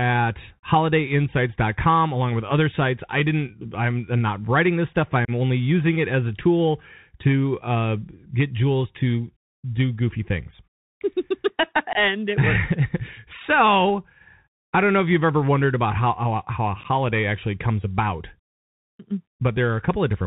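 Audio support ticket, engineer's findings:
Bluetooth CVSD headset codec, throughout. Band-limited, nothing above 4 kHz; sibilants scratchy, granular hiss under speech, loud high content distorting as the adaptive one-bit step fails to keep up. Sound consistent with 64 kbps delta modulation. Headset link component.

Unconcealed Bluetooth headset packet loss, three events. 5.25 s, between "not writing this stuff" and "only using it as": 30 ms hole. 11.93 s: 22.5 ms hole. 16.81 s, between "how how how a" and "actually comes about": 18.8 ms lost in scattered gaps over 37.5 ms, longest 11.2 ms. Each is a handful of dropped voice packets, filled with silence or an idle pattern, abrupt edges. Level returns briefly quieter as CVSD re-adapts.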